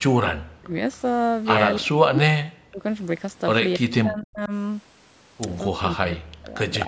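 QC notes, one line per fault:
0.0–0.75 s, 1.8–2.85 s, 3.75–4.52 s and 5.71–6.57 s, speech suppressed in double talk: the speech dips sharply, by up to about 40 dB. This is likely an echo canceller mistaking overlapping far-end talk for echo and attenuating the near-end voice along with it.
4.44–4.49 s, echo leak: a brief faint scrap of delayed speech, about 30 dB below the main voice and lagging by 276 ms, slips through. This is likely residual loudspeaker echo that the loudspeaker side's canceller failed to remove and sent back down the line.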